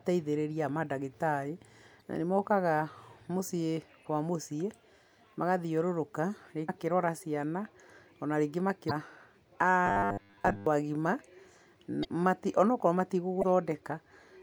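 Damaged data in a compressed stream at 1.98–2.02, 6.65–6.70 and 8.87–8.91 s: the decoder misreads broken frames and resynchronises, producing brief glitches.

Robotic sound from repeated short buffers, 9.86–10.66 s: the speech becomes a rigid 100 Hz metallic buzz, likely from a 10 ms buffer looping while most real audio is skipped.

The same compressed-stream damage recurs at 12.01–12.05 and 13.39–13.43 s as further blips.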